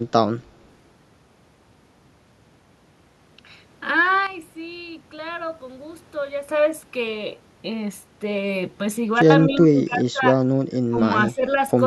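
At 4.27 s the speech and the background noise drop together by about 11 dB in a single step, with no fade. They stay down until 6.49 s and then jump back just as abruptly. This is a sudden gain jump, likely a digital gain change applied from one sample to the next without a ramp. At 9.22 s a second, shorter step of about 17 dB pulls the level down until 9.30 s, giving a brief hole in the sound.

Right after that, from 9.46 to 10.23 s, the speech is suppressed in double talk. The level dips in pieces by as much as roughly 25 dB. The likely cause is an echo canceller that could not tell the near talker from loudspeaker echo while both sides spoke, so it attenuated everything. Shorter recurrences follow at 10.90–11.01 s, with a drop of around 20 dB, and at 11.26–11.45 s, with about 15 dB.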